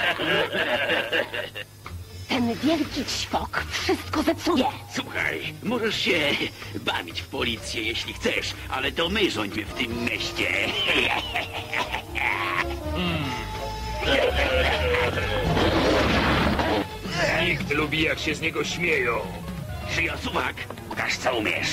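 Brief smeared blips, where the audio lurches forward, occur at 1.84, 4.55, 12.61–12.63, 17.70 and 20.90–20.92 s, skipping roughly 300, 50, 200, 150 and 200 ms. These are compressed frames skipped: lost or rejected 23.2 ms frames, with overlap softening each join.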